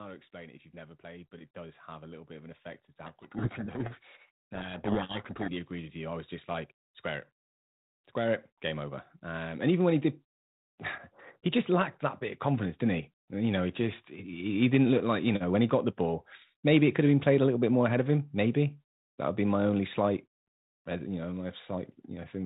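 Just after "how to", at 0.31 s, automatic gain rising begins. The gain control judged the input too quiet and kept lifting it. By 10.1 s the level has climbed by about 15 dB. Voice and background swell together throughout.

From 3.06 s to 5.52 s there is a codec payload misread. The G.726 code words arrive with their bit order swapped, so the decoder reads every value wrongly. The speech is buried in harsh distortion until the format matches again. Outside this span, the 32 kbit/s G.726 path passes speech with only light coding damage.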